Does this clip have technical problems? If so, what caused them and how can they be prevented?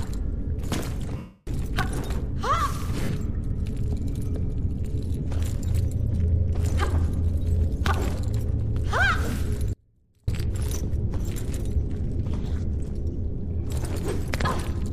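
Yes. Lost LE Audio frames occur at 1.17 to 1.47 s, a continuous 300 ms gap, and as scattered losses of about 60 ms within 3.04 to 3.12 s and 5.19 to 5.29 s. The LC3 decoder fills each gap by replaying the last spectrum with randomised signs, so the sound becomes a noisy smear. Over the longer 300 ms gap, this concealment fades toward silence. Improving link margin, with shorter range, less 2.4 GHz congestion and retransmission-capable settings, prevents this.

An audio dropout to a faint residue runs from 9.73 to 10.28 s, about 0.55 s. The sound cuts off abruptly, and only a faint trace about 35 dB below normal level remains, showing the path after the break stayed live. The likely cause is a brief interruption of the wanted signal upstream. Securing connectors and monitoring the source feed prevents it.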